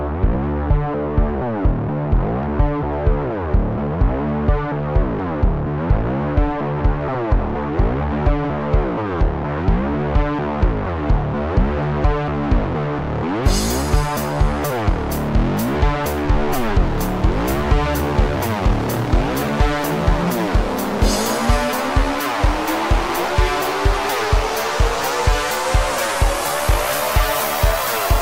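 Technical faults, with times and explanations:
No technical faults detected in the clip.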